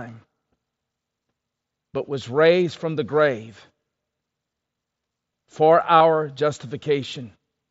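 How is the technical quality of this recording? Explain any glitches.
The recording has one glitch, a concealed Bluetooth headset packet loss from 5.99 to 6.01 s, heard against the wideband mSBC headset path, whose band stops at 8 kHz. A short run of voice packets was lost, about 22.5 ms, which fits three consecutive 7.5 ms frames. The receiver filled the gap by repeating a matching stretch of recent waveform, giving a brief buzzy sustained tone with a slight warble on recovery. On a waveform this appears as a repeated, periodic segment. On a spectrogram it shows as a smeared, harmonic band.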